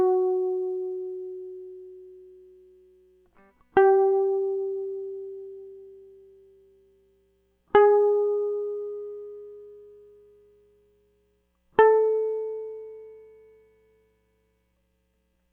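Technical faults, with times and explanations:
No technical faults can be heard anywhere in this music; the signal stays continuous and stable for its whole duration.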